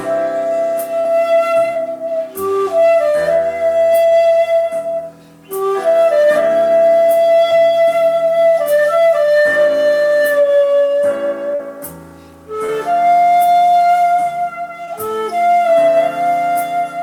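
Short concealed packet loss occurs at 1.00–1.05, 1.73–1.78, 7.51, 11.55–11.60, 12.66–12.69 and 14.85–14.88 s. Between 10 and 40 ms of audio arrived too late each time. The receiver extended the preceding sound to cover it, leaving brief smears or wobbles.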